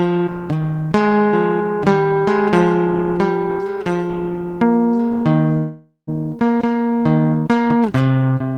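From 1.33 s to 5.31 s the music plays against a second, full-band copy of itself trailing about one and a half seconds behind and roughly 5 dB quieter, dry and without room colour, cutting in and out abruptly: a doubled audio track, likely from a second, slower capture path mixing the same signal in again.

At 5.57 s the music gives way to a fading buzzy continuation of the last sound, then silence, before returning at 6.09 s with half a second of material missing. This is a long network dropout, likely a stretch of audio that never arrived, which the receiver papered over by extending and fading what it last had.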